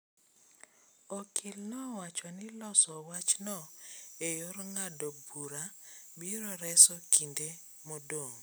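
From 3.14 s to the end of the clip at 8.43 s, the speech turns thin, bright and hissy, with sibilants jumping forward and the body of the voice receding. This is pre-emphasis left on: the treble boost that follows the FM 75 µs curve was applied but its matching de-emphasis never was, so the top end stands about 14 dB above 1 kHz by 10 kHz.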